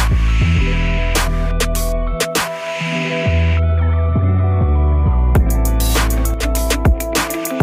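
At 6.34 s the level abruptly falls by about 6 dB, and the background noise drops with it. The quieter stretch lasts until 6.43 s, roughly 0.09 s, before the level returns. This is a sudden gain jump, likely from a gain setting applied from one sample to the next with no ramp. The instant change scales everything at once rather than fading, which is why the wanted sound and the noise floor move together.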